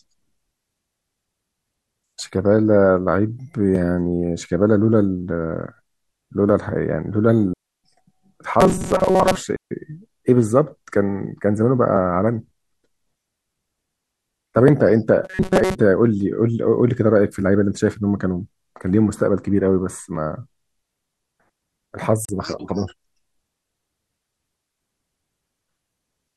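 At 7.53 s the speech drops into a clean near-silent hole for about 308 ms, then again at 9.56 s for about 148 ms. That's a digital wireless dropout: the link lost too much data, so the receiver muted with a quick fade, with no noise burst on either side.

Between those, from 8.61 to 9.36 s, and again from 15.24 to 15.75 s, the speech turns into a rigid metallic buzz at 188 Hz. This is robotic sound from repeated short buffers, likely caused by audio arriving too seldom and gaps being filled by looping a slice of roughly 5.3 ms, with most of the real audio skipped.

At 22.25 s there's a brief 37 ms hole, after which the speech carries on as though it had kept playing. That's a Bluetooth dropout, likely from a couple of late packets being discarded before reaching the headphones.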